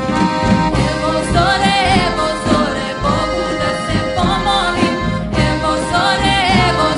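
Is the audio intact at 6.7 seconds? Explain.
Yes, the audio is intact at 6.7 seconds, with no fault audible at that moment.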